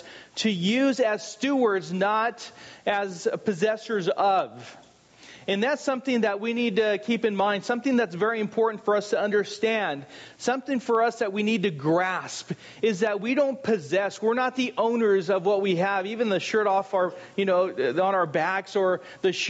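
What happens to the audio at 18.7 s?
At 18.7 s the audio is still affected by the gain pumping that runs through the whole clip. The level swings by around 15 dB. The likely cause is input gain set far too high, with a fast limiter or compressor clamping down on each peak. That squeezes loud and soft passages together, leaving the sound flattened, within a band that stops at 8 kHz.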